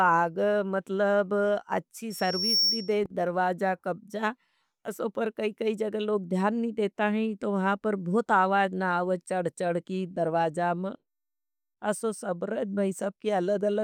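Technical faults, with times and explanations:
2.10 to 2.99 s, loudspeaker feedback squeal: right after "आग मतलब अच्छी", a single tone at 5.5 kHz rises out of the speech over roughly half a second and settles a little above the speech level, about 5 dB over it, before cutting off ahead of "दरवाज़ कब्जा ओसी पर". The microphone was hearing the loudspeaker it fed, and at that one frequency the loop gave back more than it took in, so the tone kept feeding itself.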